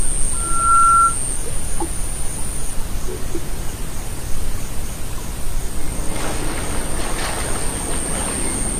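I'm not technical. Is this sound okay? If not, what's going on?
No. From 0.34 to 1.18 s there is a loudspeaker feedback squeal: a single high tone around 1.4 kHz that swells up over just under half a second and then sits louder than the rest of the sound. It happens when a microphone picks up the speaker it is feeding, so that one pitch keeps going round the loop and growing. Unlike a steady hum or a test tone, it builds from nothing into a squeal.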